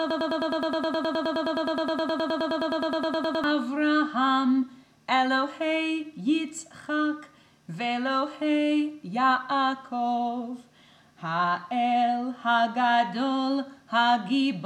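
The player, encoder or stream likely stalled and kept resending its last fragment. This produces a broken-record loop that is already under way at the start and runs to 3.44 s. A 105 ms piece repeats exactly, 32 times, and the audio due in that span is lost.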